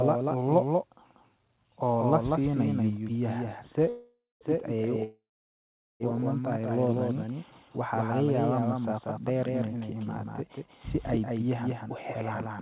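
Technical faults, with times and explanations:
Throughout: doubled audio track. A second full-band copy of the speech trails the original by roughly a fifth of a second, about 5 dB quieter, with no reverberant tail or room colouring. It is likely a second capture of the same signal through a slower path. On the waveform, each onset repeats as a smaller, identically shaped burst. On the spectrogram, every harmonic pattern appears twice, shifted right by the same gap, and both copies stop at the call path's 4 kHz ceiling.
3.89–4.44 s and 5.04–6.03 s: call audio freeze. In each stall the sound stops advancing. The last fragment is stretched into a fading buzz that decays to silence, about 0.22 s of silence in the first and 0.8 s in the second. The speech then resumes exactly where it left off, so the fills of 0.52 s and 0.96 s add gaps and drop nothing. This is likely a drained jitter buffer waiting for delayed packets. 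On a spectrogram, smeared, repeated bands fade into blank columns.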